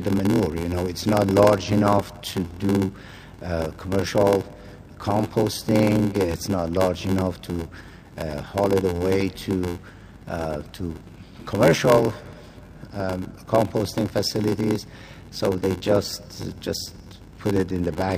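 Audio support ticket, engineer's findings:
Block size mismatch (padded), whole clip: buzz at 86.1 Hz, audio slowed to 0.861x. Short writes zero-padded into reads, which fits a 512-sample read block. Check buffer handoff between stages.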